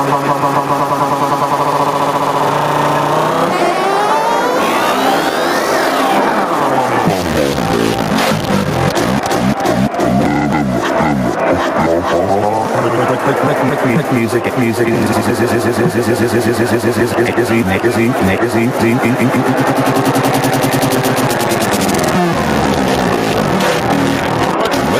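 Gain pumping runs through the whole clip, with the gain swinging by around 5 dB. The likely cause is input gain set far too high, with a fast limiter clamping down on peaks, leaving the sound squashed, with loud and soft parts closer in level.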